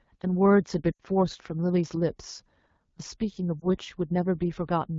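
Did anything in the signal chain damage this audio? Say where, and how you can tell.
Yes. The codec stage did. The AMR wideband (HD Voice) codec damage is plainly audible across the whole clip as rough, raspy speech. That fits a low AMR-WB rate near 8.85 kbit/s. At that rate the pulse-driven vocal tract model cannot capture the voice cleanly.

The network stage also lost AMR speech frames. From 0.91 to 1.00 s the speech drops to near silence within two frames. The gap is about 80 ms, which fits four lost 20 ms frames. The decoder kept reusing the last good pitch and vocal tract settings with falling gain. A single short dip near 3.60 to 3.66 s points to one lost frame.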